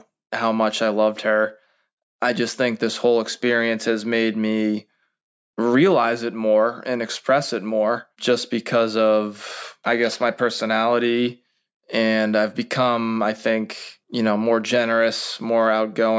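No technical faults are audible.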